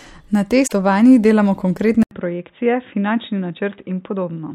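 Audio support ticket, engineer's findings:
Damaged data in the compressed stream, 0.64 to 0.72 s: short glitch. The decoder hits corrupt frames, loses sync and jumps to the next valid frame header.

Input switched to a poorer device, 2.03 s to end: 80 ms of silence, then the sound turns dull and boxy, with nothing above 3.8 kHz. The level drops roughly 5 dB and a new noise floor appears, about 55 dB down. This is likely a mid-recording switch to a narrowband microphone or a headset call profile.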